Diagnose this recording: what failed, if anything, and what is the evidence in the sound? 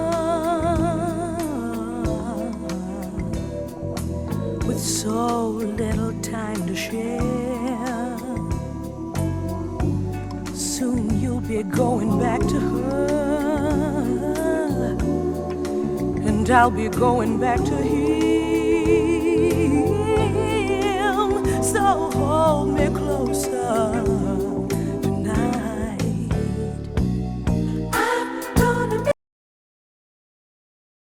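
The input went away near the end. At 29.12 s the sound cuts off mid-flow and what follows, right through to the end of the file at about 31 s, is dead digital silence, with no hiss or room tone underneath. That's an audio dropout to silence. The likely stage is upstream of the recorder, something like a disconnected device, a lost link or a mute. The writer kept committing silence for the last two seconds, and whatever happened there is gone.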